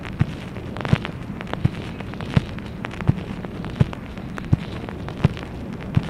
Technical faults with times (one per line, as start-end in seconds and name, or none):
none